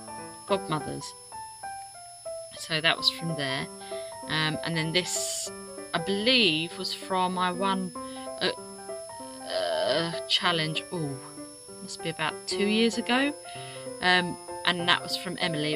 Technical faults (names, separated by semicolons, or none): switching supply whistle